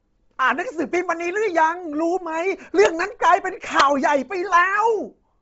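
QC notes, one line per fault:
Throughout: Bluetooth LC3 compression. The speech sounds breathy and grainy, and nothing comes through above 7.7 kHz. The top of the band sounds noisy and smeared rather than clean. That heavy damage points to a low-rate transform codec, likely LC3 as used in Bluetooth LE Audio, running at around 24 kbps with 7.5 ms frames. It strips out most of the upper spectrum and fills the gaps with noise, which gives that grainy edge.
2.86 s and 3.80 s: integer overflow. You get two sharp cracks on loud moments, much harsher than ordinary clipping. The first barely reaches the limit. The second pushes about 2 dB past it and lasts roughly 7 ms. Instead of being held at the maximum, the samples wrapped around to the opposite sign and jumped across the full range, which is why each one snaps so violently.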